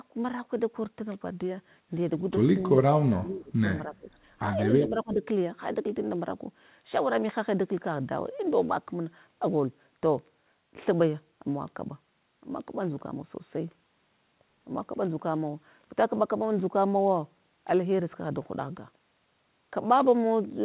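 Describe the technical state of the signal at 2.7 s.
At 2.7 s the speech dips briefly, between 2.61 and 2.78 s, by roughly 5 dB. This is speech suppressed in double talk, likely from an echo canceller turning down its own talker along with the loudspeaker echo.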